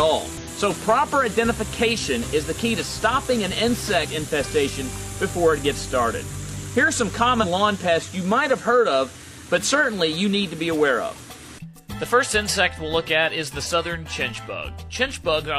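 At 4.00–4.06 s, 7.39–7.45 s and 13.61–13.67 s, damaged data in the compressed stream makes the decoder misread frames and lose sync. Each 60–64 ms event is a chirp, squawk, click or short hole.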